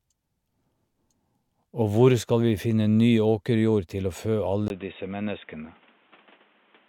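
At 4.68 s, right after "åkerjord til å fø", a gap of about 20 ms is followed by a sudden change in the speech's tone that lasts to the end of the clip. Nothing above 3.8 kHz remains, so the voice turns dull and boxy. A faint new background noise sits well below the speech, while overall loudness stays about the same. This is likely an input switched to a poorer device, a narrower-band microphone taking over mid-recording.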